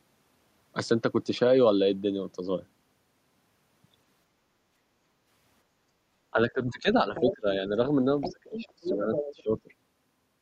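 From 4.4 to 5.25 s and again from 5.66 to 6.03 s, the background is gated by the echo canceller: the room tone is pulled down by about 6 dB and then about 14 dB while the far end plays. On a spectrogram the noise floor visibly thins, and the waveform's baseline narrows, before it recovers.

Between 6.31 and 7.47 s the talker's speech is suppressed in double talk, dipping by roughly 20 dB in patches. This is likely the canceller attenuating the near talker along with the echo. The waveform shows the envelope dipping in those patches.

Within that span, from 7.15 to 7.35 s, the other side's voice leaks through, likely as residual loudspeaker echo only slightly below the talker's level. It shows up as a second, fainter harmonic pattern overlapping the speech on the spectrogram.

The leak returns from 8.21 to 9.43 s. Overlapping it, from 8.31 to 9.69 s, the talker is again suppressed in double talk, with the same dipping waveform.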